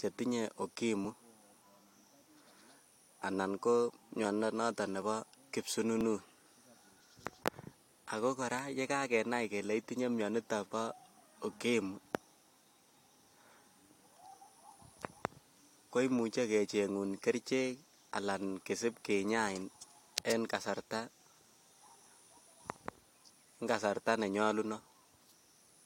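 Speech with overlap between stream segments: tiny skips at 1.05–1.07, 3.03–3.05, 5.02, 6.01 and 7.0 s fall on 1-second segment boundaries, where overlapping time stamps trim sound away, unlike dropouts, which leave silence.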